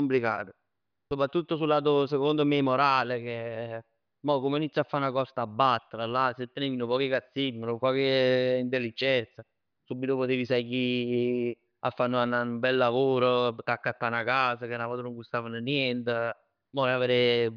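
Nothing in this recording stood out as a technical fault on listening.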